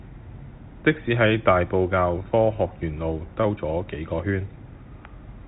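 Nothing stood out on listening to this speech, which comes through the narrow band of G.711 telephone coding with nothing above about 3.8 kHz.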